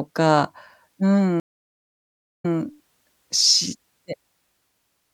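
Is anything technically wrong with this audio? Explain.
Yes. From 1.40 to 2.54 s the speech cuts to 1.04 s of silence, then resumes 104 ms earlier, repeating a sliver. This is a stream reconnect: the connection dropped and a fresh decoder restarted from resent data.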